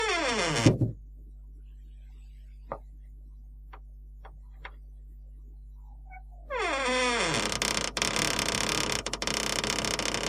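From start to finish there's mains hum sitting under the sound, a steady low drone pinned at 50 Hz with a bit of buzz from its low harmonics riding on top. It's loud, too, roughly 15 dB below the material itself, so it never really hides. That's power-line energy leaking into the signal path, the classic result of a ground loop or a transformer sitting too close to the gear or cabling.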